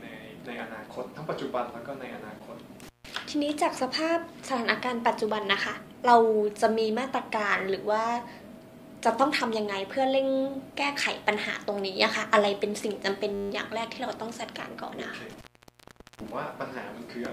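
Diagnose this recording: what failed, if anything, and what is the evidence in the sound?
Intermittent contact in the analogue wiring: the sound drops out from 2.83 to 3.10 s, and again from 15.30 to 16.31 s, with crackle at each edge. A loose plug or cable briefly opened the signal path, for roughly 160 ms and then 800 ms.

System hang loop at the driver or buffer stage, 13.34 to 13.50 s: a 10 ms slice repeats 16 times, heard as a brief 100 Hz buzz. The driver stalled while the hardware kept replaying one ring-buffer segment, which fits a 10 ms buffer, with almost no audio lost.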